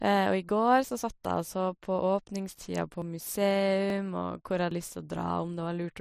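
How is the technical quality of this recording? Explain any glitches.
The speech is interrupted by five abrupt skips, at 0.49, 2.00, 3.02, 3.90 and 4.71 s. Each is a sudden jump forward in the sound, losing a few tens of milliseconds, briefest at 3.02 s and longest at 4.71 s. The likely cause is a dropped buffer (overrun): samples weren't collected before being overwritten, so the surrounding audio is spliced together. Unlike a dropout, no silent gap is heard, only the jump.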